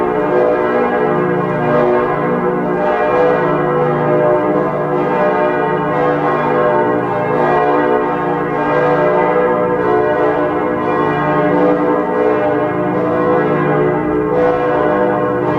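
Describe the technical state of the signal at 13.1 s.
The signal at 13.1 s is intact, with no audible fault at that point.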